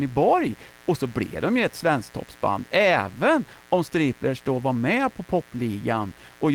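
From start to end, a mains buzz runs under the speech: switching spikes from a dimmer, rectifier or unshielded lead enter twice per 60 Hz cycle, spreading harmonics up into the kilohertz range. The result is a steady, raspy buzz about 25 dB below the speech.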